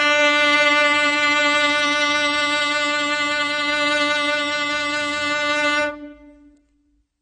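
Right through the music there's plainly audible AAC compression, likely a low-bitrate AAC-LC encode around 24 kbps: nothing above 9 kHz, so it's dull, smeared and warbly.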